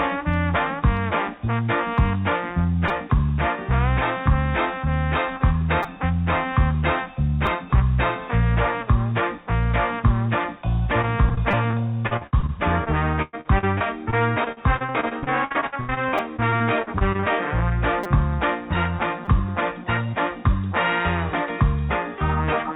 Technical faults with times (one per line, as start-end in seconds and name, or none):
2.88 repeated buffer
5.83 repeated buffer
7.46 repeated buffer
11.02-17.25 repeated packet loss (robotic sound)
11.51 repeated buffer
16.18 repeated buffer
18.04 repeated buffer
19.25 repeated buffer